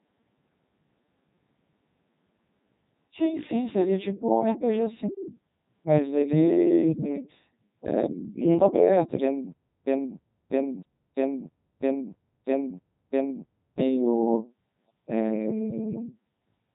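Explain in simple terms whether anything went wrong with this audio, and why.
The whole recording passed through a Codec 2 vocoder. It rebuilt the speech from simple tones, so it sounds robotic and buzzy, with nothing above 3.8 kHz.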